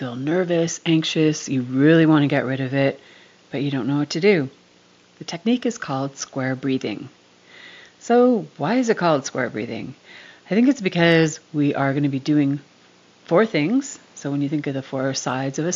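No technical faults can be heard anywhere.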